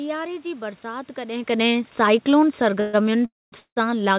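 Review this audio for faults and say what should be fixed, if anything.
Automatic gain falling, from 2.22 s to the end: the gain control judged the input too loud or its background noise too strong and steadily lowered its gain, so the speech sinks together with the room noise beneath it, unlike the level change near 1.5 s when the talker moved. Preventing it means lowering input level or slowing the AGC's downward adjustment.

Call audio freeze at 2.80–2.95 s, 3.25–3.54 s and 3.60–3.78 s: packets were likely delayed and the jitter buffer ran empty. The last sound stretches into a fading buzz, going silent for about 210 ms and 100 ms in the later two, then resumes where it stopped, with nothing lost, only delayed. A larger adaptive jitter buffer or a steadier network would prevent it.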